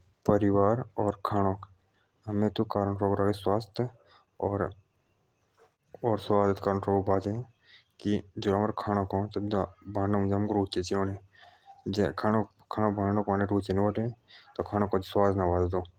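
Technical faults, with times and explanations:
Nothing stood out on listening to this speech recording.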